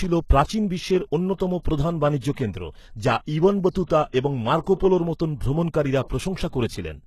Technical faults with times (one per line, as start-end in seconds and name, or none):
0.00-7.06 HE-AAC compression